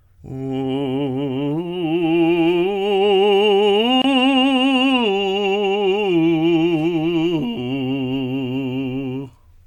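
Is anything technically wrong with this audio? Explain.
Yes. At 4.02 to 4.04 s the music stops for about 25 ms. This is a gap at a join of encoded pieces: each piece's encoder delay and last-frame padding were left in when the pieces were joined. The edges are smeared by the codec, and the music resumes exactly where it stopped, which separates this from a dropout where audio is lost.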